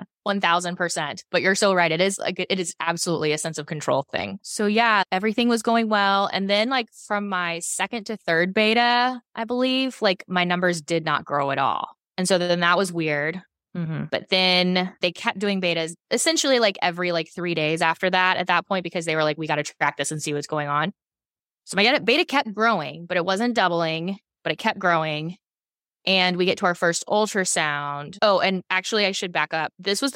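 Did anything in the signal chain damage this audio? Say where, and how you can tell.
No, nothing in the signal chain audibly damaged this speech recording, and no stage has left any mark on the signal that a listener can detect.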